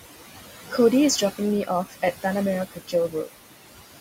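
Noise suppressor artifacts run through the whole clip. The suppressor pulls down whatever frequency bands it judges to be steady noise, by up to about 16 dB, and it recalculates every frame, so the room noise, which sits about 12 dB below the speech, dips in the pauses and swells back under each phrase. This is a frame-by-frame spectral effect. A gate would instead switch the whole signal on and off, with no tonal flutter in the residue.

Speech cut by the noise suppressor happens twice, from 2.71 to 2.93 s and from 3.09 to 3.28 s. Each time the suppressor mistakes quiet speech energy for noise and turns it down with the background, by about 16 dB in the first stretch and about 10 dB in the second. Only part of each window is hit, roughly 150 ms and 100 ms. The affected speech sounds swallowed or faint rather than silent. A dropout would leave a hard gap, but here the loss is partial and shaped across frequency.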